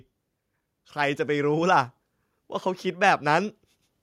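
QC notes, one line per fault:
No faults heard anywhere in the speech.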